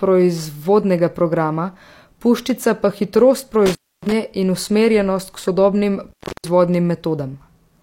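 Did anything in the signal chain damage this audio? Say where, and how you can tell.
Yes, an intermittent contact in the analogue wiring: a loose cable or plug briefly opened. After "programa puščica pa hitrost" the speech cuts out around 3.66 to 4.12 s, and after "in usmerjenost k sodobnim" around 6.09 to 6.49 s. Each break crackles at its edges and leaves faint hiss for roughly 0.3 s.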